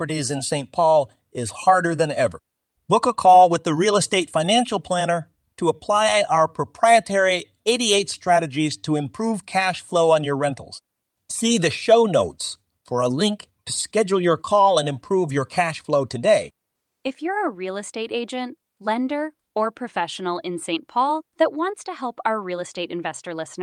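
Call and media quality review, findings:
No audible faults found in this speech recording.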